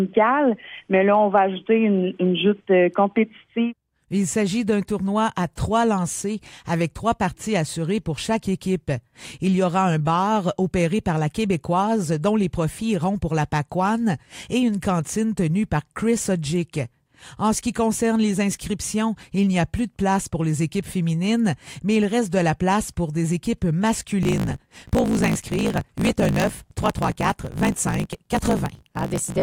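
From about 24.21 s to the end there's a block size mismatch (truncated): one stage hands over longer blocks than the next reads, which fits 1024-sample writes, and each block's tail gets dropped. You hear a 54.4 Hz buzz, with the audio rushing along 1.16 times faster but at roughly its normal pitch.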